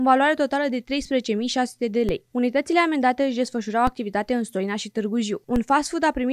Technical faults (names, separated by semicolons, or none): DC step